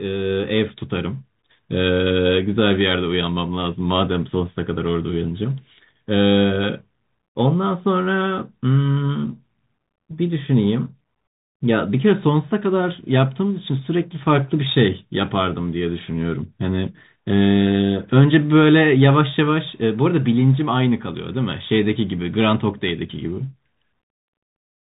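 The Bluetooth CVSD headset codec colours the speech from start to finish. The codec codes each sample as a single bit, a step up or down, with a step size that adapts, which fits a 64 kbps link. Nothing above 3.8 kHz survives, so the speech sounds boxed and narrow. Loud, bright passages outrun the step and smear into distortion, s sounds turn scratchy, and a granular hiss sits beneath everything. The damage is plainly audible.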